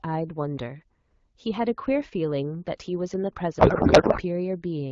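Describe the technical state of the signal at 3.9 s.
A codec payload misread runs from 3.59 to 4.21 s: the decoder is parsing the AMR-WB frames with their bit fields shifted, which fits octet-aligned packing read as bandwidth-efficient, so the speech is replaced by garbled noise and warble that barely tracks it.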